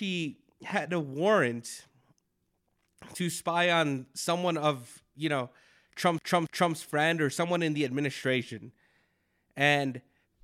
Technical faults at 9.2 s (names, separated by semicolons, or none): none